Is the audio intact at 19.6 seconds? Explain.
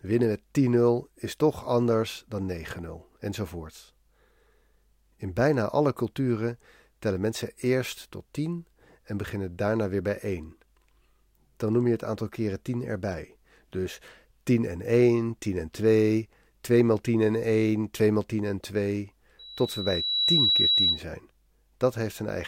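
No. At 19.6 seconds the speech is hit by loudspeaker feedback squeal, which runs from 19.39 to 21.03 s. A microphone is picking up the loudspeaker it feeds, and at 3.9 kHz the loop gain exceeds one, so that tone feeds on itself. It swells over roughly a second to sit a few decibels above the speech. Unlike a steady interfering whistle, it starts from nothing and grows, which marks it as feedback.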